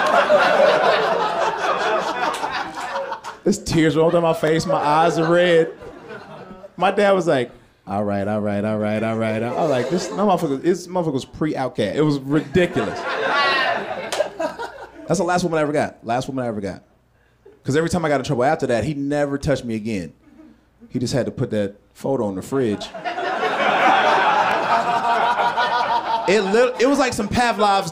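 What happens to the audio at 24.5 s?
At 24.52 to 24.54 s there is an overlapping chunks fault: the next 10-second chunk starts 20 ms early, so that slice repeats, heard as a brief click-like stutter.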